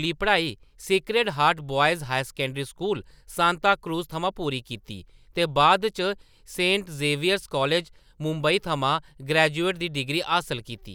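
No technical faults can be heard at any point in the recording.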